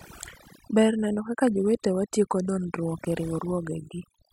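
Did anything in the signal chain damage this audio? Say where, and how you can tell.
Yes. The damage comes from overdone noise removal, a call-processing stage, and it runs through the whole speech clip. Between phrases the background drops to near silence, sprinkled with twinkling specks. The suppressor was set too aggressively. Any frequency band close to its noise estimate was pulled far down or shut off. The quieter parts of the speech fell below that line and were removed with the noise.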